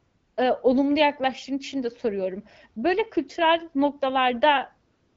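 From 0 to 0.37 s, before "ııı olumlu yaklaştığın için", and again from 4.91 s to the end, AMR comfort noise replaces the real background: the phone stopped sending speech frames and the receiver synthesised a steady, smooth hiss from a coarse level-and-spectrum estimate, heard against the AMR-WB speech.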